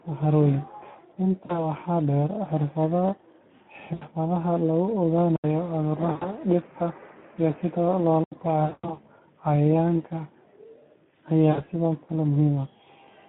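From the start the speech sounds hoarse and grainy. It is confined to a narrow telephone band of roughly 150 Hz to 3.5 kHz, with nothing above it. This is Speex codec damage. The CELP coder has too few bits to model the excitation properly, so noise and roughness replace natural voicing. The degree of harm fits a Speex stream running near 11 kbps.

At 1.45 to 1.71 s the sound briefly smears into a stretched, held sound that sags and takes a moment to recover. The same stretched, fading sound returns at 3.93 to 4.05 s, 6.11 to 6.33 s, 8.65 to 8.98 s (the longest) and 11.51 to 11.61 s. Each is VoIP packet loss concealed by the speech codec. When audio went missing, the decoder repeated its last pitch and filter at falling gain. The gaps span about 40, 80, 100, 180 and 60 ms, which fits runs of lost 20 ms packets. Because each rebuilt frame feeds the next, the speech stays weak and distorted past the end of each gap.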